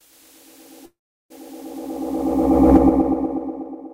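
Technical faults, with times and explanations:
0.85–1.32 s, call audio freeze. The sound stops moving forward and the last moment is carried on, then it fades into silence that lasts about 0.36 s. The likely cause is packets held up in transit, so the jitter buffer ran dry and the receiver had to fill the wait itself. When the audio returns, it picks up where it stopped. Nothing is lost, but everything after comes about 0.45 s later.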